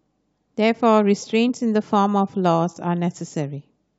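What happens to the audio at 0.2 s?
Nothing goes wrong at 0.2 s; the speech there comes through intact, with no dropout, click, distortion or other fault at that moment.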